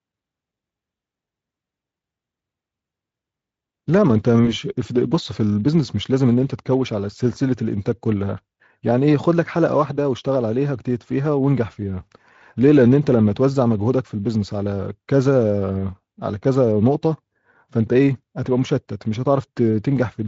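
At 4.45 s the speech briefly smears: VoIP packet loss concealed by the speech codec. A short stretch of audio never arrived, which fits the loss of a single 20 ms frame, and the decoder filled it by extending the preceding sound, so the voice turns into a buzzy or noisy, fading smear until about 4.53 s. Unlike a plain dropout, there is no silence or click, only a sustained, coloured continuation, and the Speex coding around it remains lightly marked.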